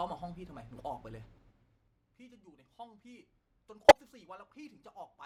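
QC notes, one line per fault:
1.2–1.92 s zipper noise: the gain drops about 20 dB in unsmoothed 3 dB steps, about seven per second, so each jump clicks and the fade ticks audibly.
3.88–3.97 s corrupt frame decoded: damaged compressed frames, likely around four, were played anyway, putting misplaced energy peaking near -10 dBFS into a brief burst of wrong-frequency sound.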